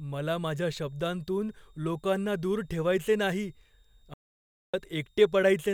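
Throughout the speech, a faint switching supply whistle wavers between 3.66 and 3.73 kHz, roughly 45 dB down, drawn as a thin wandering line on the spectrogram. From 4.14 to 4.74 s, an audio dropout to silence removes about 0.6 s, likely from a lost input. The waveform goes flat and the spectrogram shows an empty column.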